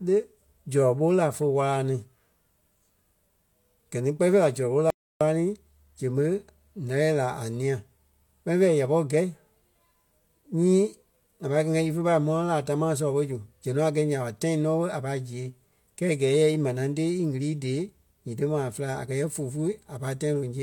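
At about 4.90 s the speech just stops dead and comes back at 5.21 s, roughly 0.31 s of silence, not even room tone underneath. That's an audio dropout to silence: the input most likely went missing for a moment, maybe a loose connection, a link hiccup or a brief mute, while the recorder kept writing silence. Whatever was said in that gap is simply gone, and both edges cut in mid-flow.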